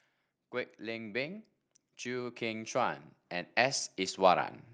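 From 0.79 to 1.47 s the level climbs by about 3 dB, then from 2.02 to 4.55 s by about 9 dB. This is automatic gain rising: the gain control judged the input too quiet and raised its gain gradually, so speech and background swell together.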